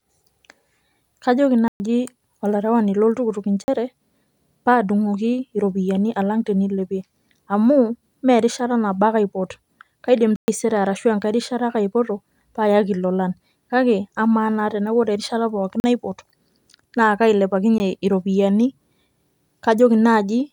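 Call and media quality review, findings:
Block of digital silence in the speech at 1.68–1.80 s (120 ms), 3.64–3.68 s (40 ms), 10.36–10.48 s (120 ms), 15.80–15.84 s (40 ms), and 17.78 s (17 ms). Probable playback buffer underrun. Hard dropouts with no fade, unlike packet-loss concealment, which fills the gap.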